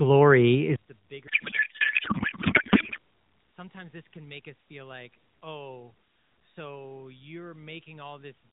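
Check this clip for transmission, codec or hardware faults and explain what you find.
Two faults are audible, one overlapping the other.

From 0.76 s to the end, the speech drops by about 25 dB and turns faint. The likely cause is one channel inverted, cancelling the shared signal when summed to mono.

From 1.28 s to 2.98 s, the speech becomes garbled, warbling noise. This is a codec payload misread: octet-aligned AMR frames decoded as bandwidth-efficient, so the fields land in the wrong places. Around it, the AMR-NB coding at 12.2 kbps keeps everything below 4 kHz.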